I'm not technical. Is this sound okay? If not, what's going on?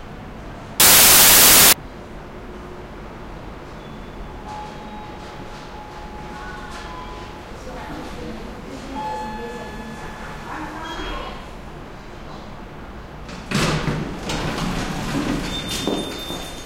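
No. From 0.80 to 1.73 s there is a fault called samples built from the wrong bytes. Each tiny slice of digital audio is stored as a few bytes, and here the player joins them up wrongly, so the fine, fast-flickering detail ends up in charge of the loudness. For that stretch the sound is replaced by loud, harsh noise.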